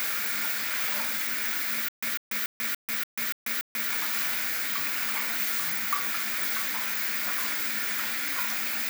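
From 1.89 to 3.90 s, a stutter with silent gaps. A 147 ms burst repeats seven times, with 140 ms of silence between. A stalled stream likely replayed its last fragment.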